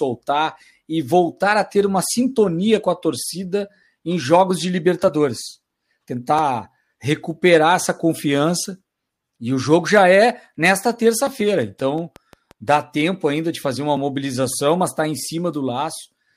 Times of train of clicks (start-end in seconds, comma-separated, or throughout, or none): 11.62-12.69